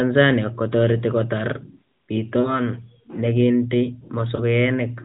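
At 2.40 s, lost AMR speech frames interrupt the sound for about 40 ms: the decoder repeats the last good pitch and vocal-tract settings at falling gain, so the sound smears into a steady warble, sags, and recovers rough by 2.60 s. At 4.36 s a single 20 ms loss gives a shorter dip, settling by 4.55 s. On a spectrogram, harmonics flatten into frozen horizontal bands below the 4 kHz ceiling and then fade. The waveform envelope droops.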